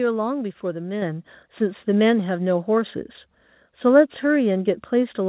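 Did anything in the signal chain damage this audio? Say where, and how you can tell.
Yes. At 1.02 s the speech and the background noise jump up together by about 5 dB in a single step: a microphone volume stepped up by the call processing, whose gain control raised the device's input level mid-signal. On the waveform the envelope steps to a higher plateau at that instant. On a spectrogram every band, including the noise floor, brightens at once, unlike a speaker simply getting louder. The narrowband call path, with nothing above 4 kHz, fits G.711 mu-law.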